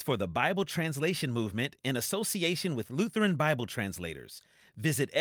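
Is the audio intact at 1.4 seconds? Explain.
Yes, at 1.4 seconds the speech plays through intact, with no audible dropout, click, distortion or other fault at that moment.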